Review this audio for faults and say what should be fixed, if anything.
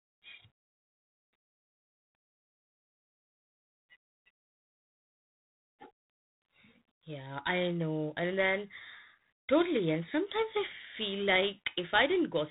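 The whole clip carries G.726 ADPCM damage. The speech has a harsh, rasping hiss that rises and falls with its level. That roughness fits coding at 24 kbit/s, with only 3 bits per sample for the prediction error. Nothing passes above 3.8 kHz. Prevent it by using a wideband or higher-rate codec on this link.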